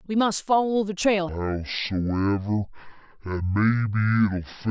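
A speech clip that drops suddenly at 1.29 s into a voice that is deep, sluggish and dragged out until the end. This is a wrong sample rate fault: everything runs at half speed and a full octave (12 semitones) lower, which fits audio recorded at 32 kHz being played back at 16 kHz without conversion.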